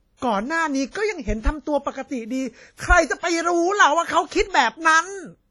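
Throughout the speech, heavy transform-codec damage is heard, likely WMA compression at a low bitrate around 32 kbps. Quantisation noise smears over tens of milliseconds, giving ringing, washy consonants and hiss that swells with the signal. A spectrogram shows nothing above 12.9 kHz and patchy, zeroed bands.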